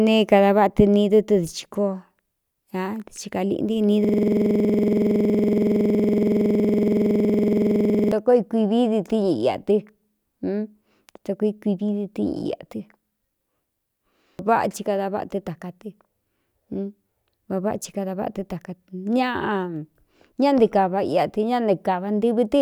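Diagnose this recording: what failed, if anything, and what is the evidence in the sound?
The driver or buffer stage failed: a system hang loop from about 4.05 s to 8.12 s. With the host frozen, the audio hardware kept replaying the same ring buffer. A 46.44 ms slice of speech repeats exactly, close to 90 times, at about 21.5 Hz. That rate sits between a coarse buzz and a rapid stutter. The loop length fits a 2048-sample buffer.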